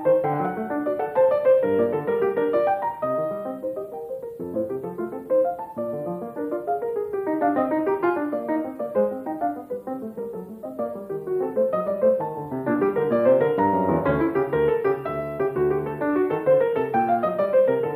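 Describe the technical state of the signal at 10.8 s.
At 10.8 s the signal is intact, with no fault present at that moment.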